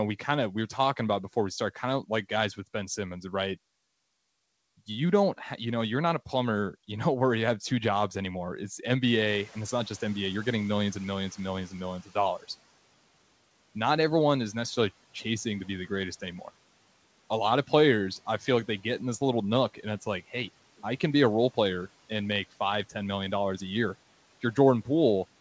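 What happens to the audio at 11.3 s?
At 11.3 s the background noise is still fading, partway through a noise suppressor catching up that runs from 9.26 s, just after "two jobs anymore it's", to 12.05 s, just before "of dollars". The room noise jumps by roughly 20 dB at roughly 9.5 s, and the suppressor's noise estimate lags behind. The noise comes through with less reduction at first, then sinks by about 8 dB over 2.79 s as the estimate adapts.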